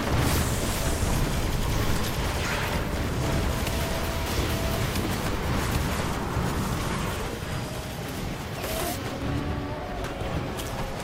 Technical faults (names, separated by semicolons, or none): bit error spike